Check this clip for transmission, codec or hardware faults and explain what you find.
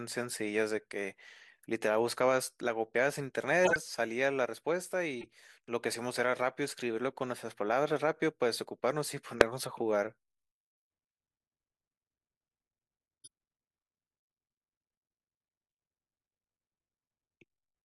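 Five bursts of corrupt frames were decoded in this speech clip, at 2.08 s, 3.65–3.76 s, 5.20–5.28 s, 9.40 s and 13.24–13.28 s. In each case, bits in the compressed stream were flipped and the decoder played the damaged frames anyway. Misread gains and codes put energy at the wrong frequencies for a few frames. The result is short chirps and squeaky blips laid over the speech. They are loudest at 9.40 s and 3.65 s and faintest at 13.24 s.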